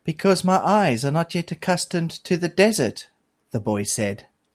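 Speech with no audible faults.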